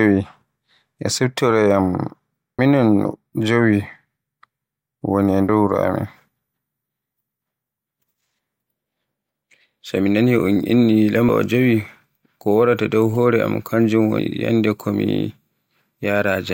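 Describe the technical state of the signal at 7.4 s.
At 7.4 s the speech signal is intact, with no fault present at that moment.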